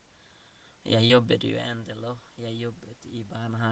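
Around 1.07 to 1.11 s there's a short concealed packet loss: about 20 ms of speech arrived too late for the decoder, so the receiver extended the preceding sound to patch roughly 18 ms and blended back in. You hear it as a quick smear or wobble.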